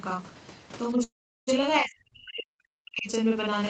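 Speech runs the full length of the clip with a channel delay (doubling) throughout: one channel trails the other by 40 ms, and summed to mono the late copy sits at equal level as a short slap right behind every syllable. On a waveform each onset appears twice, 40 ms apart. On a spectrogram the summed copies cancel and reinforce one another, giving comb-filter striping spaced every 25 Hz. From 1.03 to 1.49 s there is a call audio freeze. The last sound is stretched into a fading buzz and then about 380 ms of near silence before the speech picks up exactly where it left off. The likely cause is delayed packets draining the jitter buffer. Around 436 ms of filler are inserted and nothing is lost, so everything after is shifted later. A spectrogram shows smeared, blurred harmonics decaying into a blank column. The waveform shows a tapering tail into a flat gap. From 1.81 to 3.09 s the speech is suppressed in double talk. 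The level sags and breaks up, at its deepest by around 40 dB, as the echo canceller likely mistook it for loudspeaker echo while the far side was also talking. The waveform there shows a shrunken, choppy envelope, and the spectrogram shows the upper harmonics thinning and vanishing in patches, all below the 8 kHz band edge set by the call path.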